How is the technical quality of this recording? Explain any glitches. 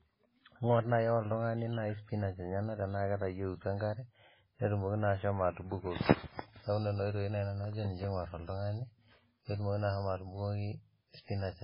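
The quality's pretty rough: the whole speech clip carries heavy lossy-codec damage, most likely MP3 compression. It runs from start to finish, with nothing above about 5.3 kHz, so the top end sounds dull and boxed in. At a bitrate that starved, which fits something near 16 kbps, the encoder chops the treble at a fixed point and drops quieter frequency detail that flickers in and out between frames. You hear that as a watery, swirly texture, metallic chirping on s sounds, and consonant attacks that smear instead of landing cleanly.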